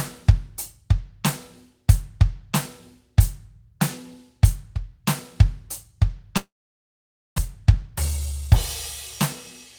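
A music clip with two linked faults near the end. From 6.37 to 7.40 s the sound breaks off in what is likely a long network dropout: the receiver briefly stretches the last audio into a fading buzz, then only silence remains for about 0.88 s, and when the music resumes roughly 0.6 s of it is simply gone. Unlike a short packet-loss glitch, the gap is long enough to hear outright, and the music jumps forward rather than picking up where it stopped. Right after, from 7.54 to 8.55 s, a jitter buffer speed-up plays the music at about 109% speed as the receiver trims small pitch-period slices to work off the extra delay, around a tenth of a second in total. Pitch stays put, which separates this from a resampling or clock-rate error, but the tempo rushes audibly before settling back.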